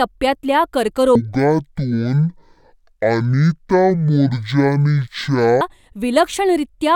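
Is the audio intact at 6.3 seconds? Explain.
Yes, the audio is intact at 6.3 seconds, with no fault to be heard there.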